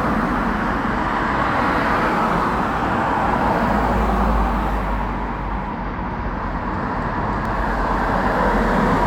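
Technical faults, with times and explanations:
7.45 s, dropped buffer (overrun): the sound jumps forward abruptly, and there is no gap of silence at the join. Roughly 50 ms of material is missing, and the audio on either side is spliced directly together, leaving a discontinuity in the waveform. The likely cause is that the capture software failed to read a buffer before the hardware overwrote it, discarding that segment entirely.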